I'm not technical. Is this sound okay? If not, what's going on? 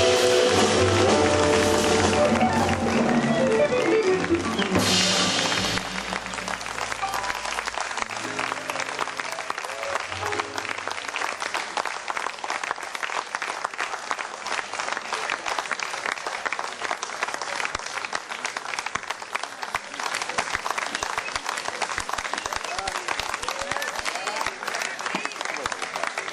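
No. From about 19.97 to 24.25 seconds, everything is heard twice, with an equally loud repeat arriving about a second and a half later. This doubled audio track is likely caused by the sound being recorded again through a slower path, or by an editing slip.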